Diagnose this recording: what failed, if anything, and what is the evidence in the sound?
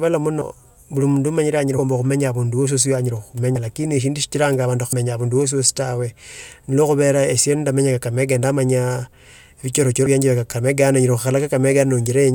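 Compressed frames were skipped at the codec or storage stage. The speech jumps forward at 0.41 s, 3.55 s, 4.92 s and 10.06 s, losing roughly 100 ms, 50 ms, 150 ms and 70 ms respectively. The lost spans fit whole multiples of a 24 ms frame. That points to frames missing from the file or rejected by the decoder as damaged.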